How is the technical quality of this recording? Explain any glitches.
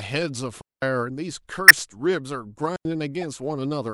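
The recording has four audible glitches of two kinds.

At 0.61 to 0.82 s and again at 2.76 to 2.85 s, the speech drops into clean near-silence for 210 ms and then about 90 ms, with no noise at either edge. This is a digital wireless dropout: the receiver lost too much data and muted the gap with a very short fade.

At 1.68 to 1.71 s there is a glitch, and at 3.21 to 3.24 s a quieter one peaks around -15 dBFS. These are corrupt frames decoded: damaged compressed data, about one frame in the first case and two in the second, was played anyway, putting energy at the wrong frequencies.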